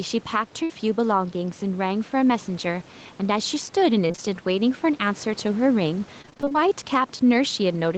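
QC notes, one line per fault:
Throughout, gain pumping: the level gets pushed back down each time the speech gets loud, with a swing of roughly 5 dB. That's most likely the input gain sitting too hot and a fast limiter or compressor clamping it on every peak. The result is that loud and quiet parts land closer together than they should, so the speech comes across squashed and breathing.
0.63 to 0.72 s, burst of packet loss: about 60 ms of audio never arrived in time, and the receiver bridged it by stretching out the last bit of sound and fading it as the gap went on. So you get a short held buzz or fading hiss, and then the speech picks up again a little further along with that slice simply gone. It's a single clean hole.
4.08 to 4.20 s, short concealed packet loss: three back-to-back drops of about 20 ms each, starting at 4.08, 4.11 and 4.16 s. Each time the receiver filled in by carrying the previous sound forward, pitched if it was voiced and as shaped noise if not, then crossfaded back into the real signal. 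It comes out as a brief smear or wobble across that tenth of a second, and a quick consonant in there can get swallowed.
6.22 to 6.70 s, repeated packet loss (robotic sound): nine separate gaps land in under half a second, the longest about 22 ms, and roughly half that stretch ends up being patched rather than real audio. Each hole gets papered over by extending the last sound, then the next one hits almost immediately, so it turns choppy, with fragments of the speech missing.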